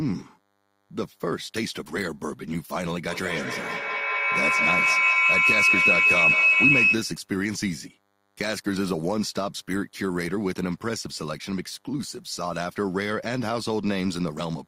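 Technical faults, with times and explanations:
Throughout: DECT cordless phone buzz, a thin, steady buzz about 40 dB below the speech, caused by a nearby DECT handset or base sending radio bursts every 10 ms that the audio circuit rectifies. On a spectrogram it shows as fine horizontal lines at 100 Hz and its many harmonics, running unbroken across the whole clip.
3.09 to 7.30 s: feedback howl, as a second device on the same call lets microphone-to-loudspeaker echoes return louder on each trip. The repeats narrow to a tone around 3 kHz that pulses roughly every 200 ms and peaks about 8 dB above the speech. On a spectrogram this is a bright, thickening band near 3 kHz. On the waveform the envelope swells well past the speech level.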